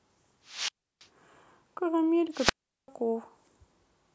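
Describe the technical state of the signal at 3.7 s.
At 3.7 s the speech signal is intact, with no audible fault at that moment.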